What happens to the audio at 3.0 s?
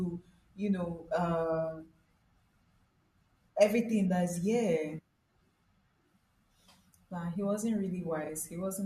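Nothing goes wrong at 3.0 s: the speech runs on intact through that moment, with no dropout, click or other fault to be heard.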